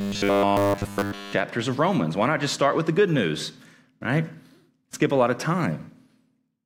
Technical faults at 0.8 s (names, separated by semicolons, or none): robotic sound from repeated short buffers